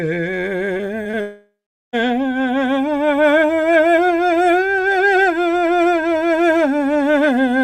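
A music clip with packet-loss damage early on. Short concealed packet losses occur at 0.77–0.81 s, 1.03–1.07 s and 1.11–1.15 s. Each drops about 20 ms, patched by extending the previous sound, heard as a brief smear or wobble; a spectrogram shows frozen, horizontally stretched harmonics, and the waveform shows a small seam where real audio resumes. From 1.21 to 1.95 s the music turns into a fading buzz and then about 0.4 s of silence, before resuming with that section gone. On a spectrogram this appears as stretched harmonics dimming into an empty dark gap, and the waveform as a decaying envelope flattening to nothing. The likely cause is a long network dropout.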